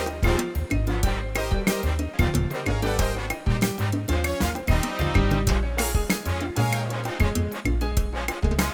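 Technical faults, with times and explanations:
2.13–2.15 s, skip ahead: Playback jumps forward with no gap filled. About 0.7 s of audio is simply gone. The stretch was dropped while later audio was already queued, so the two sides of the cut butt together almost directly and the sound lurches ahead.
7.14–8.73 s, jitter buffer speed-up: The audio runs about 4% fast while keeping its pitch. The buffer had built up extra delay, so the receiver trimmed many short pitch-period pieces in a row, roughly 70 ms in all.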